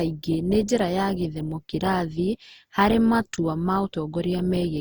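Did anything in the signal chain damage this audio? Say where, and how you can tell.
Yes, at the codec stage: generation loss. The speech sounds swirly, hollow and smeared, with blurred onsets throughout, likely from about four Opus re-encodes near 48 kbit/s, each on a shifted frame grid.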